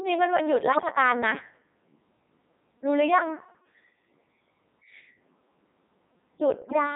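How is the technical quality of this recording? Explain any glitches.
The technical quality is poor. The whole recording is heavily processed, and two short bursts of corruption break up the speech.

From start to finish the speech sounds robotic and buzzy, with a synthetic tone. It also has a steady mechanical character that natural speech lacks. That is the sound of the Codec 2 vocoder, which fits its highest 3.2 kbit/s mode. Codec 2 does not send the actual waveform. It sends only pitch, voicing, energy and a rough spectral envelope for each frame, and the decoder rebuilds the speech from sine waves. The damage here is heavy, so the result sounds rebuilt rather than recorded.

From 0.72 to 0.92 s, and again from 6.62 to 6.76 s, the speech abruptly warbles and bleeps. Its pitch, loudness and tone colour lurch unpredictably for a moment. These are bit errors on digital voice radio. At such a low rate every bit steers a whole frame's pitch, level, voicing or spectrum, so flipped bits, roughly 4% in the first burst and 7% in the second, turn a handful of frames into robotic gibberish.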